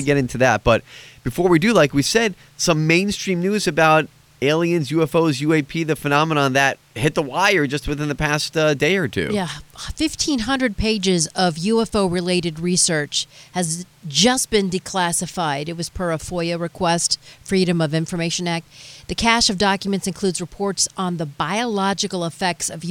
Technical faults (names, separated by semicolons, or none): none